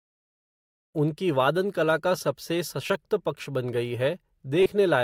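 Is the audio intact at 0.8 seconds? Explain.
Yes, the speech is intact at 0.8 seconds, with no fault to be heard at that moment.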